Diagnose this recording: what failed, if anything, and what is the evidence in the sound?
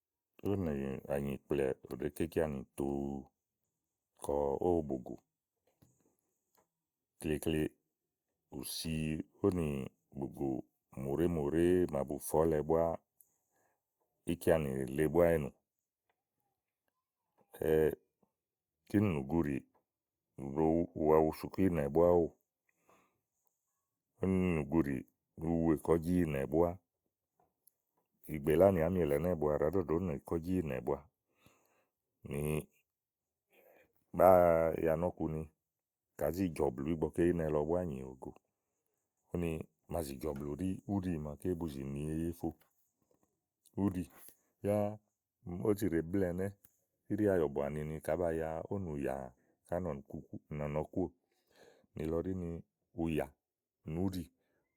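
Nothing in this speech recording points to a failure at any stage, so there's nothing to diagnose here.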